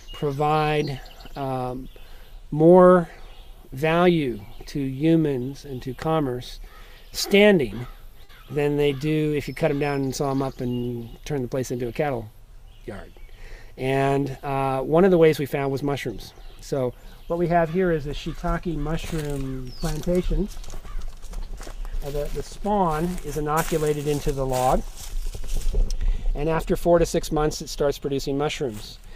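At 8.23 to 8.31 s, a burst of packet loss occurs: a run of consecutive packets failed to arrive in time for playback, and about 60 ms of audio is missing. The receiver bridged the hole by extending the last thing it had decoded for roughly 52 ms and lowering its level as it went. The result is a brief held tone or fading hiss, followed by a jump forward where the sound resumes with that stretch gone.

At 27.35 to 27.38 s, there is a short concealed packet loss, far smaller than the first. About 20 ms of data missed the decoder's deadline, and the receiver synthesised a continuation of the preceding sound for roughly 13 ms before blending back into the real signal. This leaves only a quick smear or wobble, and any very brief transient falling inside that window can disappear entirely.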